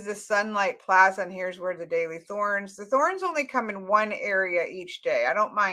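No technical faults are audible.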